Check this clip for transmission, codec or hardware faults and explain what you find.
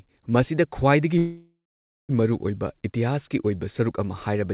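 There's one transmission fault, a call audio freeze, heard through a narrowband call path that stops at 4 kHz, which fits G.711 mu-law. From 1.18 to 2.11 s the speech stalls. The last sound stretches into a fading buzz, then goes silent for 0.54 s, and the speech picks up right where it stopped. The likely cause is packets held up in transit so the jitter buffer ran dry. That inserts roughly 0.9 s of gap while losing essentially nothing.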